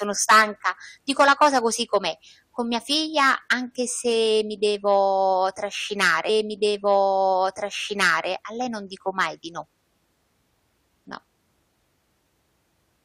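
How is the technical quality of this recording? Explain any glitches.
The recording has one glitch. A stream segment is repeated from 6.28 to 8.28 s: the player delivered the same chunk of the stream twice, so about 2.0 s of the speech plays again just before "a lei non dico", with a small blip at the jump back.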